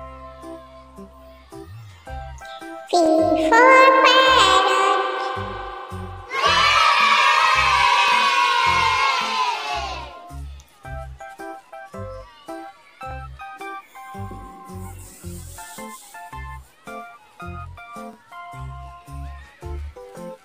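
Overlapping chunks at 3.06, 8.08, 13.11 and 18.13 s. Each 5 s chunk starts early, so 25 ms plays twice, giving a regular click or stutter.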